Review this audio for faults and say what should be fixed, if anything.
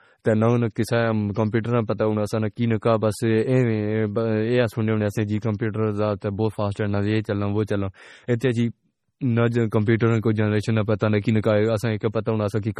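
MP3 compression runs through the whole speech clip. Nothing is heard above 14.2 kHz, and the heavy, watery swirl, where weak frequency lines switch on and off from frame to frame, fits a low MP3 bitrate around 32 kbps as the likely cause. That shifting texture is what tells it apart from a plain low-pass filter, which would dull the sound evenly.

Pre-echo smears three attacks. The first is at 8.39 s, after "یہ چلوں وہ چلوں" and before "تے جی". The other two are at 9.86 s and 9.99 s, before "کو جنریشن". At each point a short hiss of 14 to 19 ms leads into the onset, because the codec spread noise across the block into the quiet moment before the attack. A click would be a single sharp tick, whereas this hiss leads into the attack.

Encoding at a higher bitrate, or with a codec that switches to short blocks on attacks, would prevent both faults.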